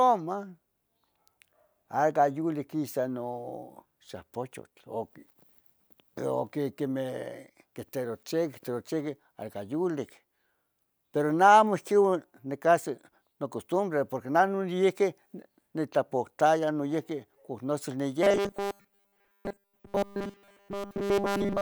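Audio is likely arriving too seldom from about 18.23 s, right after "oc nosel", to the end of the clip, so the playback side keeps refilling the gap by looping its last short buffer while fresh speech is dropped. This robotic sound from repeated short buffers runs essentially throughout that stretch: the loop imposes a fixed 200 Hz buzz, consistent with a 5 ms buffer, turning the voice into a rigid metallic drone that only loosely tracks the words.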